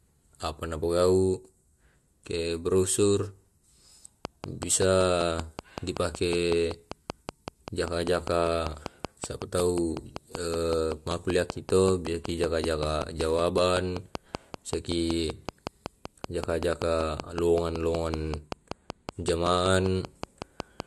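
Speech clip. From 4.25 s to 20.81 s, a train of clicks ticks at a regular 5.26 per second. That is about a hundred, roughly 15 dB above the speech. The likely cause is interference or a faulty connection or supply.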